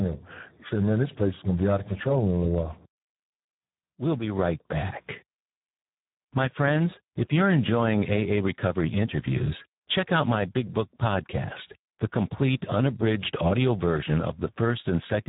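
From start to end, the speech carries Speex codec damage. It is heavy. The excitation is starved of bits, so the speech sounds hoarse and noisy, which fits a bitrate near 8 kbps. Nothing remains above 3.8 kHz.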